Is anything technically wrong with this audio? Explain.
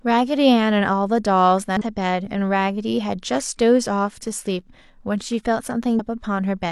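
Yes, there is damaged data in a compressed stream at 1.77 to 1.82 s and 5.95 to 6.00 s. The decoder misreads corrupted frames and briefly loses sync, producing short glitches of about 50 ms.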